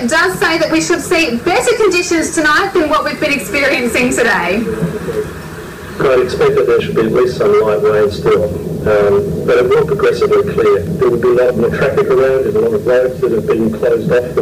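Hard clipping runs through the whole clip: the signal reaches a stage driven about 14 dB past the level it can pass, so every peak is sliced off flat at the ceiling. With an overload that large, roughly one sample in seven sits against the limit, and those squared-off tops generate harmonics reaching high into the spectrum. The result is a harsh, constant fuzz on every loud moment rather than occasional crackle on isolated peaks.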